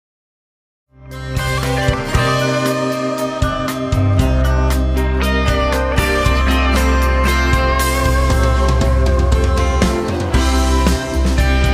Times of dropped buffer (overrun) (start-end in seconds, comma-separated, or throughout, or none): none